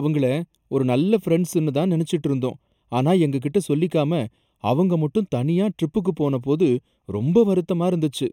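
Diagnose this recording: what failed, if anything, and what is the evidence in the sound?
Throughout the speech the sound is hollow and phasey, with a dulled, scooped upper midrange and fixed notches that don't move as the voice changes. A first notch near 1.5 kHz, with further ones spaced evenly above it, points to channel delay (comb filtering) at the driver or buffer stage. One channel is late by roughly a third of a millisecond, a few samples, so summing to mono cancels the shared content at those regularly spaced frequencies.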